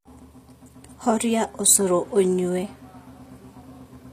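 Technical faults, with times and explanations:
Throughout: HE-AAC compression. The encoder has likely coded only the lower spectrum and rebuilt the treble by copying lower bands upward, consistent with about 24 kbps. The synthetic highs don't line up with the real harmonics, leaving s sounds gritty, metallic and lispy.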